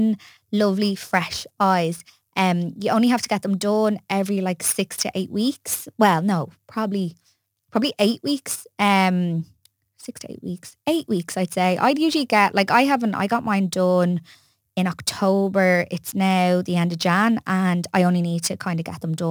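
Speech throughout carries a gritty, inharmonic fizz that rides on louder and brighter syllables, about 25 dB below the voice: crude rate conversion, pointing to 48 kHz reduced to 44.1 kHz by keeping nearest samples without filtering.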